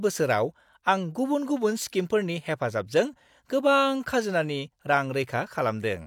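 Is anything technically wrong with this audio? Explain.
No, nothing is technically wrong with this audio.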